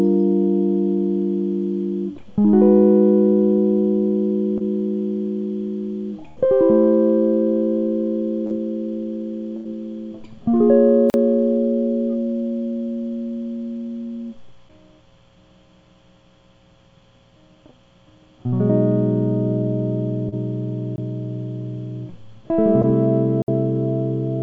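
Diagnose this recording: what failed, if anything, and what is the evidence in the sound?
Network, with the receiver concealing: short concealed packet loss smears the music briefly at 4.58–4.62, 8.46–8.52, 20.29–20.34 and 22.82–22.85 s, as 20–40 ms of missing audio gets patched from what came before.

A burst of packet loss, also on the network side, hits at 6.28–6.38 and 9.56–9.67 s. About 80 ms goes missing each time, held as a fading continuation before the music picks up further on.

A block of digital silence points to a driver or buffer stage failing to deliver samples in time. Hard cuts to silence occur at 11.10–11.14, 20.96–20.98 and 23.42–23.48 s. Those holes run 40, 20 and 60 ms, all inside a call path where nothing reaches above 8 kHz.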